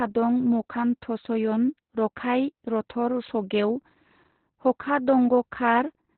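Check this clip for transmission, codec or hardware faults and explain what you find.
One codec fault runs through the whole speech clip. Opus voice compression in its SILK linear-prediction mode, squeezed to a narrowband setting that fits a rate near 8 kbps, discards everything above 4.2 kHz and codes the excitation coarsely, leaving the speech heavily muffled, hoarse and faintly robotic from start to finish.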